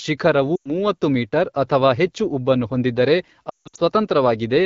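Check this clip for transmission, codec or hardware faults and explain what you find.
Two stretches of lost AMR speech frames are audible, carried over an AMR wideband (HD Voice) link whose clean band-limited tone fits roughly 12.65 kbit/s.

Lost AMR speech frames, 0.56 to 0.79 s and 3.49 to 3.81 s: radio errors corrupted frames, so the decoder kept repeating its last good pitch and vocal tract settings while lowering gain. The first gap, about 100 ms, drops to near silence within two frames. The second is broken into scattered losses with a longest run of 160 ms, so the speech dies quickly to near silence, and returns weak or rough.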